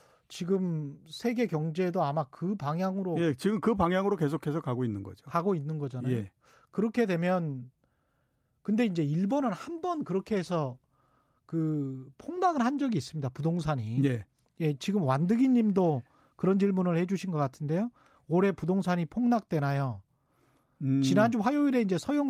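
No technical faults can be heard anywhere in this speech recording. The audio runs without any break, dropout or audible defect.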